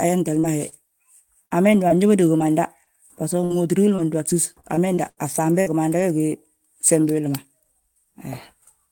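At 0.39 s a short concealed packet loss begins. About 40 ms of speech never arrived, and the receiver bridged the hole by extending the preceding sound before blending back into the real signal. It is heard as a brief smear or wobble. On a spectrogram the harmonics run unnaturally flat and steady through the hole, and the waveform shows a repetitive, slightly decaying stretch where the real detail should be.

The last 20 ms of that patch, from 0.43 to 0.45 s, is a lost packet rebuilt from error correction. The following packet carried a coarse low-bitrate copy, so the decoder played that instead of a gap, which fits a single 20 ms frame. It sounds rougher and grainier. On a spectrogram the texture turns noisier.

The same pairing recurs from 0.69 to 0.74 s. About 26 ms is concealed by continuation, and the final 20 ms, from 0.72 s, is rebuilt from the error-correction copy, giving a second short smear followed by a rough frame.

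From 1.46 to 6.02 s comes repeated packet loss, with a robotic sound. Twelve separate gaps fall across this stretch, totalling about 0.4 s, roughly 9% of it, and the longest is 77 ms. Each hole is patched before the next one arrives, so the speech turns choppy. A spectrogram shows recurring blocks of smeared, frozen harmonics, and the waveform shows periodic looped segments. Roughly 0.4 s of it comes from error-correction copies, which appear as grainier frames.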